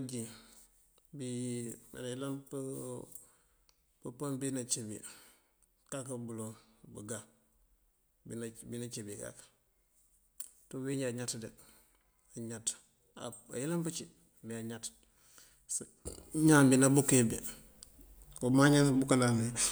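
At 16.07 s the speech and its background noise jump up together by about 12 dB and stay there. This sudden gain jump likely comes from a gain change applied without a ramp.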